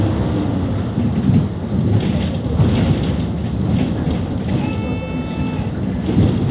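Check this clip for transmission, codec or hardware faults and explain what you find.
No faults found.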